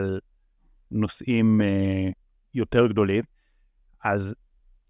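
No technical faults are audible.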